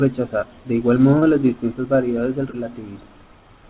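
At 1.19 to 1.25 s, between "de igual" and "las distintas variedades del", short concealed packet loss occurs. About 30 ms of the band-limited call audio arrived too late. The receiver extended the preceding sound to fill the gap, heard as a brief smear. It recurs at 2.51 to 2.56 s, just after "las distintas variedades del".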